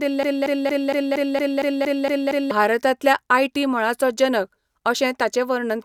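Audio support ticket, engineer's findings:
Broken-record loop, 0.00–2.51 s, already running when the clip opens. A 0.23 s speech fragment repeats back to back about ten times. Likely cause: a stalled player or stream re-sending its last buffered fragment. The speech due in that span is missing.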